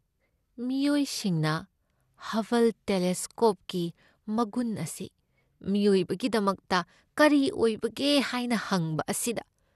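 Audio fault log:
throughout, MP2 compression: the speech sounds dull and carries a gurgling, granular roughness, and nothing is present above about 12.2 kHz. This is likely the result of MPEG Layer II coding at a low rate, consistent with around 80 kbps. Starved of bits, the encoder shuts off upper sub-bands and quantises the rest coarsely. On a spectrogram the top is cut flat at 12.2 kHz, with blocky patches flickering in and out below it.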